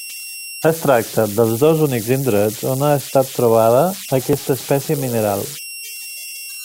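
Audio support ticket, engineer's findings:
Whistle near 3 kHz throughout the speech, clearest in pauses, grainy under quiet passages, about 14 dB below signal. Converter idle tones: undithered delta-sigma stage cycling on small input. Pitch tracks DC offset, not mains, so not hum. Tonal rather than a steady hiss, so not plain noise floor.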